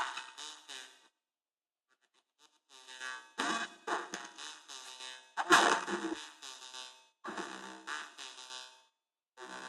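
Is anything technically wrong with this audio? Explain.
Yes. Compressed frames were skipped twice, at 6.13 to 6.18 s and 7.25 to 7.30 s. At each point whole frames of the encoded stream were not played, either missing or rejected by the decoder as damaged. The audio jumps forward by roughly 300 ms and 200 ms respectively, which fits runs of about fifteen and ten 20 ms frames, and the sound resumes abruptly at a later point in the material.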